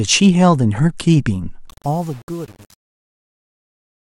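From 1.67 s to the end at 4.18 s, the speech fade-out carries truncation distortion on a fade. The gain stage drops low bits without dither. The roughness points to only about 7 bits of resolution. As the level falls, the waveform collapses into a few coarse steps. The tail turns gritty. The fade itself starts around 1.7 s.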